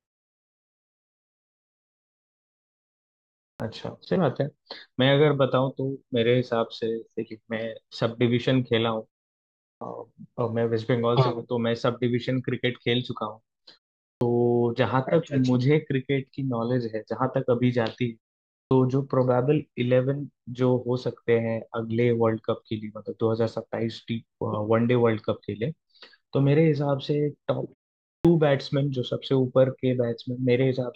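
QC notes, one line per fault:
3.56, 9.77, 14.17, 18.67 and 28.21 s, clipped start after a pause: the output device drops into a low-power or unlocked state during silence and isn't ready when the signal resumes. About 36 to 42 ms of each onset is lost, so speech jumps in abruptly without its first sounds. This follows the opening 3.56 s of silence and gaps of only 0.47 to 0.74 s.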